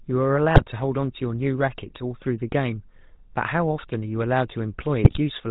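Throughout, the speech has passed through the GSM full-rate codec, which fits a 13 kbps link. It rebuilds the voice from a vocal-tract model driven by sparse regular pulses and drops everything above 4 kHz. The result is a plainly audible buzzy, gravelly roughness and a dull top end.

GSM bit errors strike from 0.55 to 0.64 s and again from 5.04 to 5.18 s. Corrupted bits reached the decoder, scrambling the filter, pitch and gain values across what sounds like several consecutive frames. Each burst is heard as a brief squawk and gargle.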